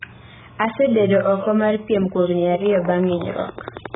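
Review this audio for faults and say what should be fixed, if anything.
AAC compression, heard throughout: the speech is dull and smeared, with nothing above 3.8 kHz and a heavy warbling, fizzy texture on sustained sounds and sibilants. This is likely lossy AAC-LC coding at a starved rate, which fits a bitrate near 8 kbps. The encoder lowered its cut-off and quantised the remaining bands so coarsely that holes and noise-filled patches replaced real detail. To prevent it, encode from the original at a much higher bitrate.

Train of clicks, from 2.66 s to the end at 3.95 s: about fifteen clicks of near-identical shape tick over the speech at a regular 10.9 per second, peaking about 10 dB above the signal. A steady pulse this evenly spaced likely comes from electrical interference from nearby equipment or a faulty connection or power supply injecting the same transient repeatedly. To prevent it, isolate the recording chain from noisy equipment and check its connections and power supply before recording.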